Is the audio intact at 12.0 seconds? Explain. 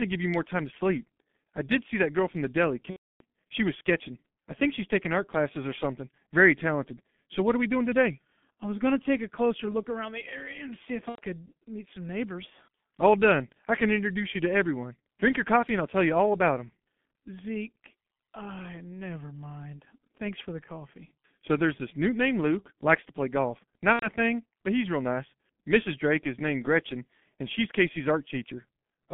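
No. At 12.0 seconds, as throughout the clip, the speech has passed through the G.723.1 codec at a low rate that fits roughly 6 kbit/s. The band is limited to 150 Hz to 3.5 kHz, and its slowly updated 30 ms frames leave the speech heavily muffled and hoarse, with smeared consonants.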